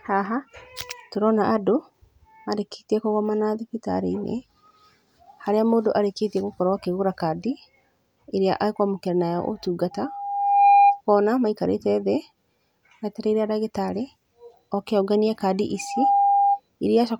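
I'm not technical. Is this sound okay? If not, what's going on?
No. There is loudspeaker feedback squeal from 9.91 to 11.01 s and from 15.78 to 16.60 s: the microphone re-captures its own loudspeaker, and one pitch, near 805 Hz, swells within a second into a whistle louder than the speech.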